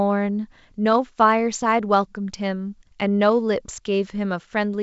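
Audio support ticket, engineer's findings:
Findings: no fault found; the speech carries G.722 wideband telephone coding at 64 kbit/s as expected, with nothing above 7.7 kHz and at most faint coding traces.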